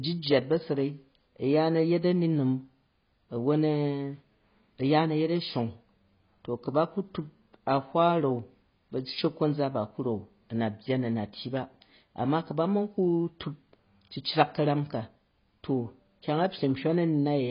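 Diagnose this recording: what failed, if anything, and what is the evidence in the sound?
Codec stage: throughout, the speech stops at 5.1 kHz, a flat ceiling on the spectrogram, with dull, fizzy sibilants. This is likely heavy AAC compression at roughly 16 kbps.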